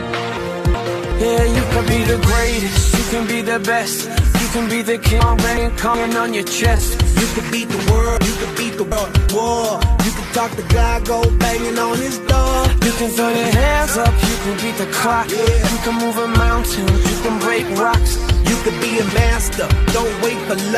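At 0.37 to 1.12 s and again at 5.20 to 5.94 s the sound jumps backwards: chunks out of order, one block of about 0.37 s playing after the next instead of before it. At 8.17 to 9.29 s it arrives two chunks late, a longer jumble.

At 6.76 to 6.80 s and 13.31 to 13.34 s the decoder covers over damage: a corrupt frame concealed, the decoder muting or smearing damaged AAC data. The first fits two frames, the second one.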